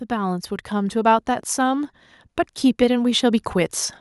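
From 0.08 s to 1.96 s, automatic gain rising lifts the speech and background together by about 6 dB, a slow swell. The waveform envelope widens steadily across that span.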